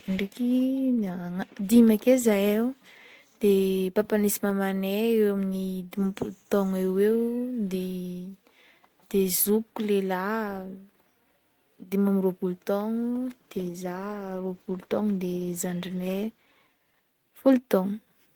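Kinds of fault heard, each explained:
Call bitrate drop, 12.97 to 17.59 s: just after "dimy ambiroapolo" the speech turns coarser and duller as the call's bandwidth estimate falls and the encoder is pushed from 40 kbps down to 16 kbps. With fewer bits to spend, Opus codes each frame more crudely and trims the upper frequencies, so the voice sounds rough, watery or muffled. It stays at its worst for about 3.6 s before quality climbs back.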